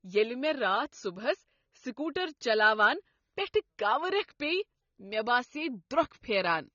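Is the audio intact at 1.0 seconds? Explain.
No. At 1.0 seconds the speech is dull and smeared, with nothing above 6.9 kHz, as throughout. This is likely AAC compression at a low bitrate, around 24 kbps.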